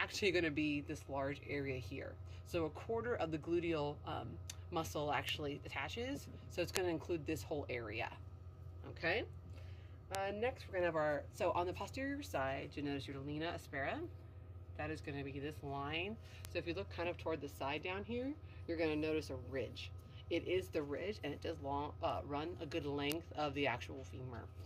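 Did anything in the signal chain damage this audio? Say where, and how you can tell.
Yes: bit error spikes at 5.29, 6.77, 10.15, 16.45, 22.10 and 23.12 s, lone broadband ticks unrelated to the sound, pointing to flipped bits in storage or a digital link, unlike dropouts, which leave gaps.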